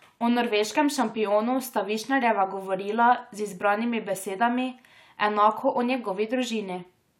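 A speech recording with no technical faults to report.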